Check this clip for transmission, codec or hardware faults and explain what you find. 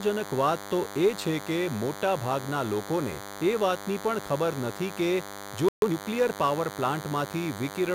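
Three faults are present: a continuous DECT cordless phone buzz, a brief playback stall, and a time-compressed catch-up straight after it.

DECT cordless phone buzz runs through the whole speech clip. A DECT handset or base nearby transmits a short radio burst every 10 ms, and some stage of the audio circuitry rectifies that RF into the signal path. The result is a thin, steady buzz at 100 Hz with a dense stack of harmonics, sitting around 15 dB below the speech. It is audible under the talker.

The playback stall runs from 5.69 s to 5.82 s, immediately after "નથી કે જો". The speech cuts out mid-flow and the output goes silent for about 137 ms. The likely cause is the player's buffer running dry or its audio thread being blocked, so it had nothing to deliver until it recovered. The gap is long enough to hear as a clear break in the phrase.

The time-compressed catch-up follows the stall, from 5.82 s to 5.94 s. 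To work off the backlog built up during the gap, the player removes short segments and cross-fades the remaining pieces together, here at 2× speed. Pitch stays unchanged, so the speech comes out hurried but at its normal register.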